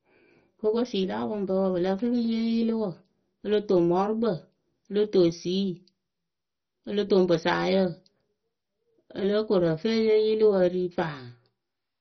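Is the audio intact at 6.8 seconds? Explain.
No. At 6.8 s the speech carries heavy MP2 compression damage, which runs through the whole clip and likely comes from encoding at a very low bitrate. With too few bits to share across its sub-bands, the encoder switches off the upper ones and quantises the rest coarsely, so the sound is dull, gurgling and granular. A spectrogram shows a hard ceiling at about 6.1 kHz, with blocky bands flickering on and off beneath it.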